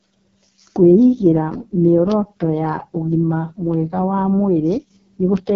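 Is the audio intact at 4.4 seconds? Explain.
No. At 4.4 seconds, as across the whole clip, the speech carries heavy AMR wideband (HD Voice) codec damage. The codec models the voice as pulses driving a vocal tract filter up to 6.4 kHz, then fills the band above that with shaped noise, leaving nothing above 7.5 kHz. Here the result is rough and raspy, which fits the codec's lowest rate, around 6.6 kbit/s, where there are too few bits to track the voice cleanly.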